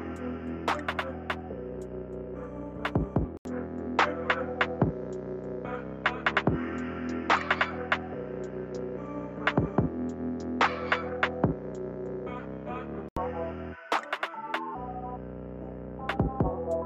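From 3.37 s to 13.17 s the sound turns duller and boxier, with nothing above 7.6 kHz, a level shift of a few dB, and a faint new background noise sitting roughly 45 dB below the signal. An 80 ms silence marks the drop-in, and the full-band sound returns at 13.17 s. That's most likely the input switched to a poorer device for about ten seconds, say another mic or a headset's call profile with its own narrower band, tone and noise.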